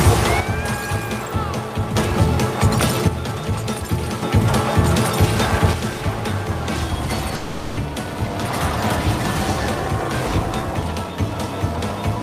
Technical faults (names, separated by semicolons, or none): one channel drops out; long network dropout